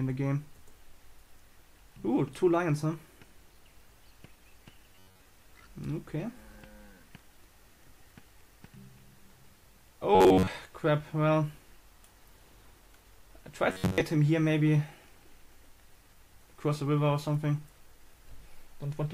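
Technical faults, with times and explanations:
4.93–5.25 s, 10.15–10.47 s and 13.70–14.01 s: robotic sound from repeated short buffers. Each burst lasts about 0.3 s. The sound turns into a stiff, metallic buzz pitched at 93.8 Hz. That pitch points to a segment of roughly 10.7 ms being looped. New audio was likely arriving too late, so the last short slice was replayed to fill the gap. Most of the sound in each span is repetition, and the real audio is skipped.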